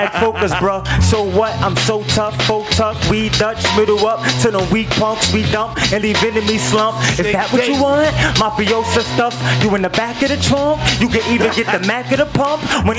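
Gain pumping all the way through: the gain swings by about 10 dB under loud sounds, likely a hot input hitting a fast limiter.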